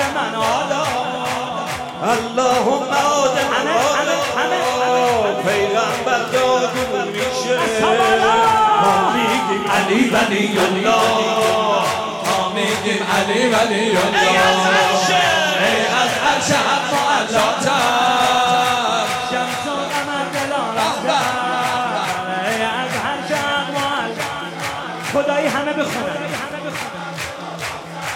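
Nothing in the audio stood out as a technical problem on listening.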